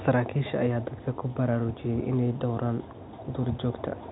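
No technical faults are audible in this speech.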